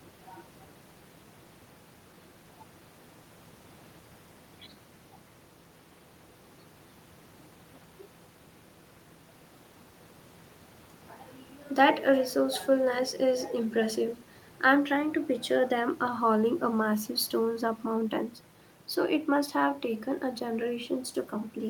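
No technical faults can be heard anywhere in the speech; the signal stays continuous and steady throughout.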